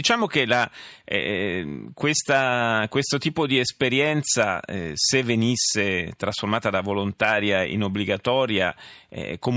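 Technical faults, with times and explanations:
No technical faults are audible in this speech recording.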